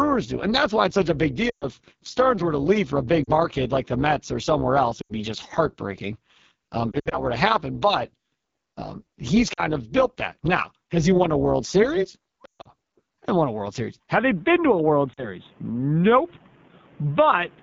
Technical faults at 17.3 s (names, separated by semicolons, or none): AMR wideband (HD Voice) codec; input switched to a poorer device